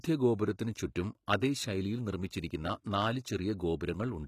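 Throughout the speech there is plainly audible codec damage, likely HE-AAC compression: the treble is rebuilt from copied lower bands, so s sounds turn gritty and lispy, consistent with a low bitrate around 20 kbps. A spectrogram shows blocky, repeated-looking upper bands and nothing above 14.9 kHz.

At 1.26 s a pre-echo appears: the transform block spread its quantisation noise about 15 ms ahead of a sharp attack, so a short hiss precedes it and the onset sounds smeared. The waveform shows a low noise smear before the transient.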